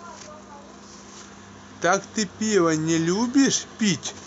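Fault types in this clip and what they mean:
No technical fault can be heard anywhere in this speech recording; the signal stays steady and intact throughout.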